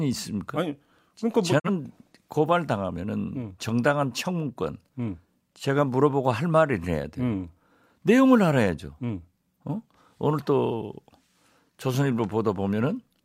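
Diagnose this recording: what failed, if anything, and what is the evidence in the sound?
Digital broadcast dropout at the reception stage: from 1.58 to 1.70 s the speech fades out over 20 ms and mutes, which fits one failed frame silenced by the receiver.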